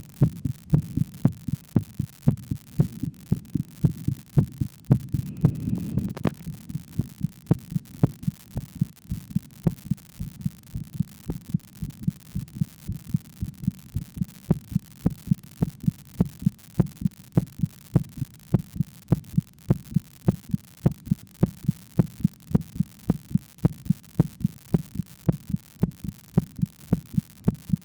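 An unreliable data bit affects the audio from start to finish. One bit is wrong in a random share of samples. Every error adds a spike of the same size, about -26 dBFS. The result is a constant crackling fizz that continues through the quiet passages.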